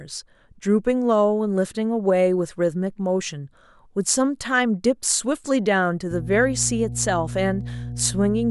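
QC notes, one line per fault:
6.11–8.51 s, mains hum: a ground loop or stray transformer field couples the 60 Hz power line into the signal path, laying a steady low tone with some low harmonics under the speech until the end, sitting fairly loud, only somewhat below the speech.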